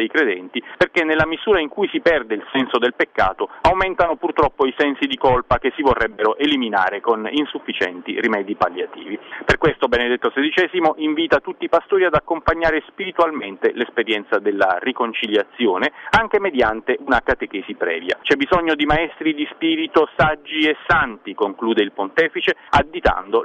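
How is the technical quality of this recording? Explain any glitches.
There's one glitch worth flagging: a brief moment of hard clipping at 18.91 s. For a few milliseconds the signal hit the ceiling of whatever stage it was passing through, and the peaks got sliced flat instead of rounding over. The overdrive is only about 0 dB, so the waveform barely grazes that stage's limit. The squared-off tops add a little high-frequency content, which comes across as a tick or crackle on the peaks there rather than any sustained fuzz.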